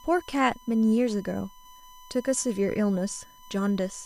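A steady USB whine runs under the speech from start to finish, a fixed 1 kHz tone from USB frame current leaking through power or ground, sitting roughly 25 dB below the signal.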